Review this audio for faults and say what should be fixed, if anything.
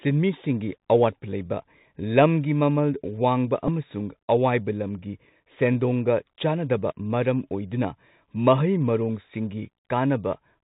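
The whole clip carries the Bluetooth CVSD headset codec. This narrowband speech codec sends one up-or-down bit per sample at 64 kbps. Nothing above 4 kHz survives. A granular hiss sits under the speech, and s sounds turn scratchy. The damage is plainly audible. Record over a wideband link or a wired microphone instead.

From 3.68 to 3.70 s there is a Bluetooth headset packet repeat. About 7.5 ms of audio went missing, which fits two lost packets. The decoder played the last packet again, giving a brief buzzy tick. Keep the headset close to the phone and away from radio interference.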